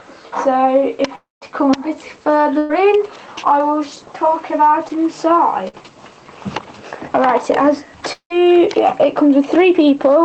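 A long network dropout at 1.15 to 1.44 s cuts out about 260 ms. The last sound is stretched into a fading buzz or hiss and then about 160 ms of silence, likely because no audio arrived at all. A burst of packet loss follows at 2.58 to 2.85 s. About 120 ms goes missing, and the receiver holds and fades the previous sound across the gap with no silence before the audio resumes further on. At 4.88 to 5.00 s, short concealed packet loss drops roughly 20 ms. The decoder patches it by extending the preceding sound, leaving a brief smear. Another burst of packet loss at 5.68 to 5.83 s removes about 60 ms, bridged by a short fading continuation. A second long network dropout at 8.12 to 8.32 s loses about 180 ms, heard as a dying tail and then about 90 ms of silence before the audio returns.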